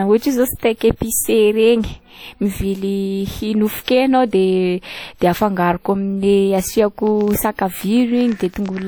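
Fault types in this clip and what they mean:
WMA compression: The whole clip has the ringing, washy texture of a transform codec. The quantisation noise is smeared over long blocks and breathes with the speech, and the damage is plainly audible. It's likely WMA, which fits roughly a 48 kbps encode.
Pre-echo: At 3.86 s there's a short burst of hiss, about 19 ms long, just before an attack. The codec spread noise meant for the loud onset across the quiet moment in front of it, so that attack comes out softened.
Train of clicks: From 7.07 s to 8.83 s you get around twenty similar clicks at an uneven pace, roughly 11 per second, sitting about 5 dB above the speech. That points to likely interference or a flaky connection or supply injecting pulses.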